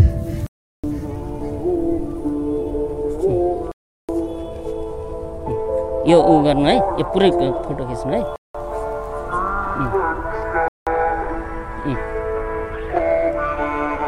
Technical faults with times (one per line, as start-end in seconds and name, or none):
0.46-0.84 block of digital silence
3.72-4.09 block of digital silence
8.36-8.54 block of digital silence
10.68-10.87 block of digital silence